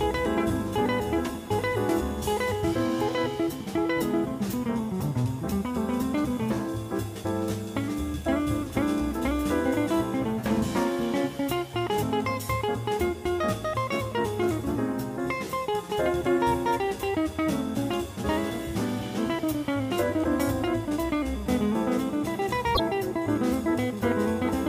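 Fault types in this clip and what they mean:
Repeated frames: A short stretch of compressed audio plays twice near 22.74 s. The repeated block is 26.1 ms, which fits a single coded frame. It is heard as a brief stutter. The clip runs 26.1 ms longer than it should.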